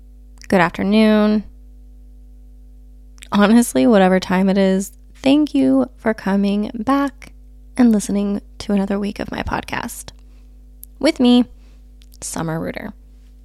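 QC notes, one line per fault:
Throughout, mains hum: there's a steady low drone at 50 Hz sitting under the speech the whole way, about 25 dB below it. That's the power line leaking into the signal, most likely from a ground loop or a transformer near the cabling, which is why it never changes pitch or level while the talking comes and goes on top.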